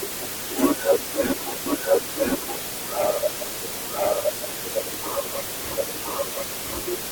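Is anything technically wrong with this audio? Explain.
Yes. Throughout the clip, a steady, even hiss sits nearly as loud as the speech, only a few decibels below it, with no crunchy distortion. This is low bit depth with dither, which fits a 4-bit signal. Dither randomizes the coarse rounding error, turning it into constant white noise.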